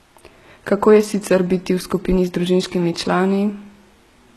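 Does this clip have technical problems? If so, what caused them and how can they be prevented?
Yes. Throughout, the speech has gritty, lispy s sounds and nothing above 12.3 kHz. This is likely HE-AAC compression, rebuilding treble from copied lower bands, at roughly 16 kbps. Prevent it by encoding at a higher bitrate.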